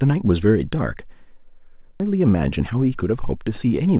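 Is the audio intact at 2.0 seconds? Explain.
No. At 2.0 s there is a skip ahead: roughly 0.7 s of speech was dropped while later audio was already waiting, so playback jumps forward with no filled gap. The speech on either side is spliced almost directly, and the missing stretch simply vanishes.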